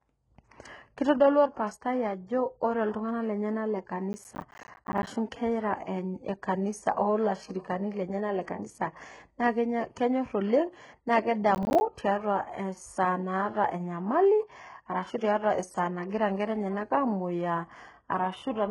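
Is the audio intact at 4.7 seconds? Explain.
No. Processor overload crackle runs from 4.13 to 5.07 s, just after "ore iltung'anak lenyanak le". The processor keeps missing its deadlines for short buffers of roughly 10 ms. About thirty of them come out as silence, so the speech tears into a gritty crackle.

The speech at that moment also has nothing above 11.4 kHz. This is likely low-bitrate audio saved at a high bitrate. An early HE-AAC encode at 12 kbit/s stripped the detail, and the later MP3 at 256 kbit/s cannot restore it.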